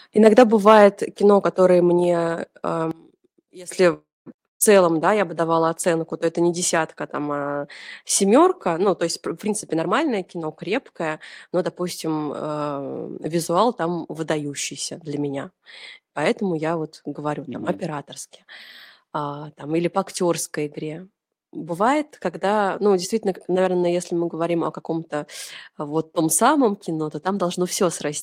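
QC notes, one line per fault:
2.91–3.71 s, one channel inverted: level drops about 19 dB as centred speech cancels in mono, likely from reversed polarity on one stereo channel.
3.93–4.28 s, call audio freeze: last sound held then fading to silence, likely delayed packets emptying the jitter buffer; 328 ms inserted, nothing lost, resuming at "целом да я бы".
4.46–4.62 s, burst of packet loss: about 140 ms of speech missing, bridged by a concealment tail that fades to near silence before audio resumes further on.
9.04–12.69 s, jitter buffer speed-up: speech after "а семерка ну то" runs about 9% fast at unchanged pitch, roughly 0.3 s trimmed in pitch-period pieces to cut delay.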